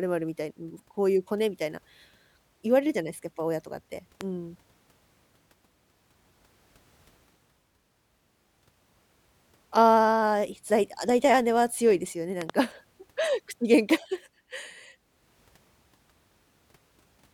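At 4.21 s a single loud pop lands on the speech, peaking about 10 dB above it, and at 12.42 to 12.52 s a second one arrives as two pops in quick succession. The likely cause is a voltage spike from a plug, switch or static discharge, shaped into a thump by the circuitry downstream. Unlike a dropout click, the speech continues unbroken beneath each pop, with nothing missing.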